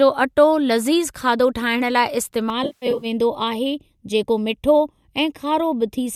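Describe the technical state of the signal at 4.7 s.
At 4.7 s the speech carries channel delay (comb filtering), running from 2.5 s to the end. One channel lags the other by about a third of a millisecond, and the mono sum cancels at evenly spaced frequencies starting near 1.5 kHz, giving a hollow, phasey tone. The notches stay fixed rather than sweeping as in flanging.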